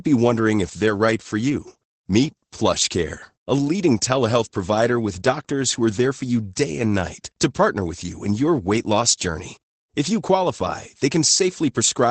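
Throughout the speech the sound is muffled and hoarse, with a faintly robotic edge and no content above about 8.7 kHz, so sibilants lose their sparkle. That is Opus voice compression in its SILK linear-prediction mode. At a low bitrate (the damage fits roughly 12 kbps), the encoder limits itself to wideband and quantises the excitation signal coarsely, which smears the fine texture of the voice into this dull, grainy character.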